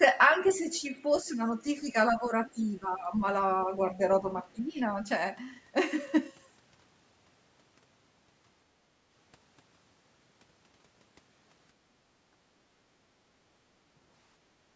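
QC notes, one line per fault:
0.46–0.61 s and 1.13–1.22 s, other side's voice leaking through: residual loudspeaker echo the canceller likely failed to remove reaches the microphone, so two brief scraps of a second, fainter voice sit far under the speech, about 25 dB and about 30 dB below it.
0.58–3.23 s and 4.22–5.07 s, speech suppressed in double talk: with both sides talking, the echo canceller likely mistook the talker for echo and turned everything down, so the speech dips by up to roughly 10 dB in pieces, around a second and a half in the first span and under half a second in the second.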